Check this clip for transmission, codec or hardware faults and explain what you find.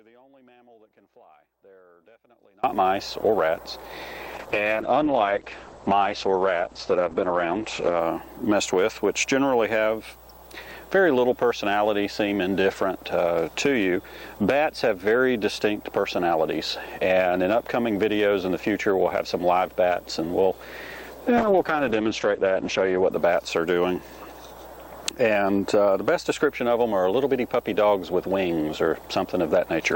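Two kinds of fault are present: an audio dropout at the very start and two call bitrate drops later on.

Audio dropout to a faint residue, from the start to 2.64 s: the wanted signal is missing, most likely because the path lost its source while staying live downstream. Only a faint trace of the sound remains, about 35 dB below its normal level. At 2.64 s the full signal snaps back abruptly rather than fading in.

Call bitrate drop, 4.39 to 8.05 s and 21.4 to 23.17 s: the call's bandwidth estimate fell, so the encoder was told to spend far fewer bits. The sound's character fits a fall from around 64 kbps to about 9 to 10 kbps. Coding turns coarse and the top end is cut from 20 kHz to 8 kHz, making the sound muffled and rough. The degraded stretch lasts about 3.5 s the first time and 1.7 s the second.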